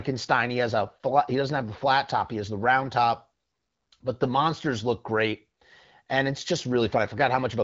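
No technical faults can be heard in this speech.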